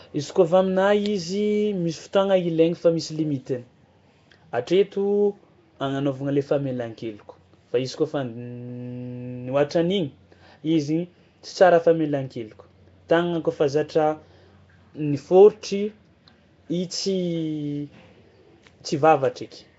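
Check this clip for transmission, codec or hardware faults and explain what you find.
A single codec fault runs from start to finish: Nellymoser compression, likely from the Nellymoser Asao encoder that Flash used for microphone audio. The encoder allots a fixed, meagre bit budget to each short block of samples, leaves weak bands empty and fills them with noise. The damage is plainly audible: the speech has a rough, hissy halo and a smeared, underwater colour. Nothing comes through above 7.7 kHz, which fits a stream of around 32 kbps.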